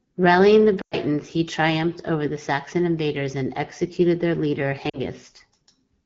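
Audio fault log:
0.82–0.95 s and 4.89–4.99 s, lost AMR speech frames: the decoder keeps repeating the last good pitch and vocal tract settings while lowering the gain. The sound smears and dies away to near silence within two frames; the first gap lasts about 100 ms, which fits roughly five 20 ms frames, and the second about 40 ms, about two frames. On a spectrogram, harmonics stretch flat and fade. The waveform envelope shrinks to near silence, then returns briefly weak and rough.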